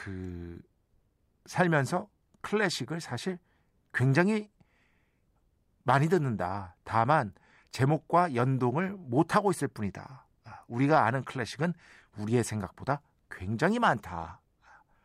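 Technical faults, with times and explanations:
Listening through the speech, nothing stood out as a technical problem.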